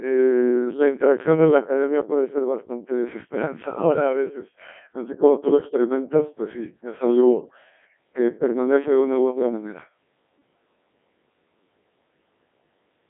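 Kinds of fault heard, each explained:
Codec 2 vocoder: The whole clip has been through a very low-rate digital-radio vocoder that keeps only pitch, voicing, loudness and a rough spectral shape, then rebuilds the speech from sine waves at the far end. You get that heavy robotic buzz throughout, squeezed into a phone-style band of roughly 200 Hz to 3.4 kHz with nothing above 3.6 kHz. The damage is severe, which fits a setting around 1.6 kbit/s.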